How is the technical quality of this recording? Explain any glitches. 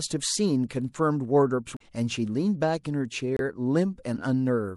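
The recording has two kinds of fault, one running through the whole speech clip and one at two brief moments.

Throughout, the sound is watery and swirly, with sibilants turning metallic. This is likely MP3 compression at a low bitrate, around 64 kbps: short of bits, the encoder zeroes weak frequency lines that flicker between frames.

From 1.74 to 1.81 s and again from 3.37 to 3.40 s there are short glitches. This is damaged data in a compressed stream: corrupted bytes make the decoder misread frames, lose sync and skip ahead to the next header.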